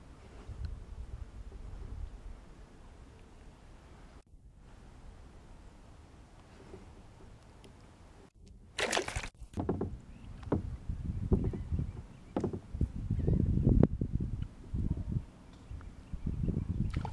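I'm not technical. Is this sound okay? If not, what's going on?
Yes, no faults heard.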